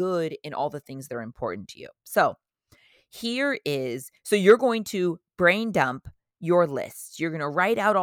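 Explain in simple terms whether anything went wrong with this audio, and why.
Nothing went wrong here; it's just someone talking, with no glitches, dropouts or odd sounds anywhere to catch your ear.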